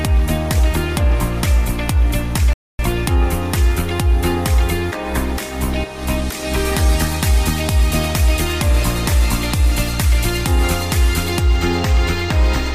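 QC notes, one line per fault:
2.53–2.79 s, rebuffering stall: the player runs out of downloaded audio and waits, so the sound drops to silence, then resumes exactly where it stopped, adding about a quarter second.
11.40–12.75 s, channel delay (comb filtering): one channel arrives a tiny fraction of a millisecond late, consistent with a two-sample offset, and the mono sum cancels near 10 kHz, dulling the top end.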